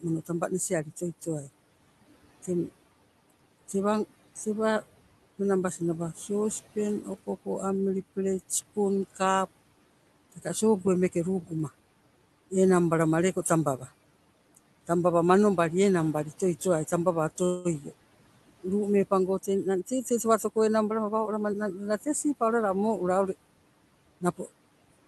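Noise suppressor artifacts run through the whole speech clip. The steady room noise, about 19 dB below the speech, is pulled down by about 18 dB between phrases. It swells back under the talking.

At 17.45 s, right after "toi towai tambawa", a call audio freeze begins. For about 0.2 s the last sound is stretched into a fading buzz or hiss. Speech then resumes where it stopped, with nothing lost. A delayed packet stream is the likely cause.

From 19.50 to 21.53 s comes a jitter buffer speed-up. The receiver snips out tiny pitch-period slices, about a fifth of a second in total, to shrink the backlog. Speech runs at 109% speed. The pitch stays the same, but the delivery sounds hurried.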